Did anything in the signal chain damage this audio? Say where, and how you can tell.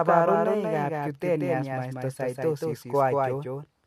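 Yes. A doubled audio track runs through the whole clip. Each syllable repeats around 200 ms later, a few dB quieter, at full bandwidth and with no decay or room colour. The likely cause is a second, slower capture path or an edit holding two offset copies.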